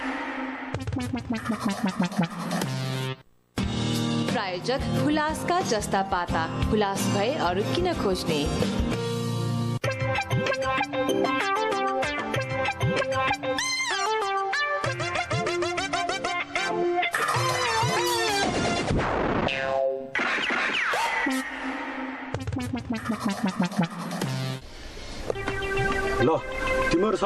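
No technical faults can be heard anywhere in the audio.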